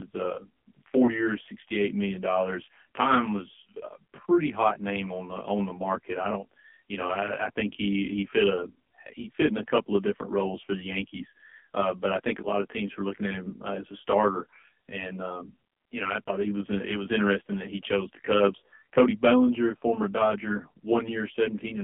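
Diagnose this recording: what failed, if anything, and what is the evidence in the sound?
One channel reached the mono sum late by about 20 ms, at the channel or buffer stage, before the two channels were combined. Everything common to both channels cancels at evenly spaced frequencies, with the first notch around 30 Hz and the rest packed closely above it. A delay this long gives the speech a rough, slightly doubled quality with fixed notches throughout, rather than just dulling the top.

The call was carried through the AMR narrowband mobile codec, and the damage is plainly audible. The sound is confined to a telephone line band of 200 Hz to 3.4 kHz, with nothing above 4 kHz. The buzzy, synthetic texture fits a low AMR-NB mode, around 7.4 kbps, where a pitch predictor and a handful of pulses per 5 ms rebuild the voice from a vocal tract model.

Lost AMR speech frames occur twice on the radio or network side. 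Each is a brief dip or warble, heard at 1.06–1.11 s just before "years sixty eight million" and at 16.25–16.30 s between "um you know I" and "he was uh it". Each event fits a single 20 ms frame failing its checksum. The decoder then reused the last good pitch and vocal tract settings at reduced gain, so the speech briefly wavers instead of cutting out.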